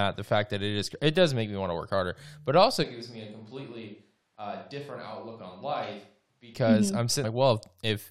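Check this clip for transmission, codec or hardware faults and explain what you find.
Two faults are present. From 2.85 to 6.53 s, just after "work harder but also", the close microphone likely dropped out and a distant microphone took over: the speech turns roomy and hollow, thinner in the bass, about 10 dB quieter, with faint background noise. At 7.23 s, damaged data in the compressed stream makes the decoder misread a frame and lose sync, producing a brief glitch.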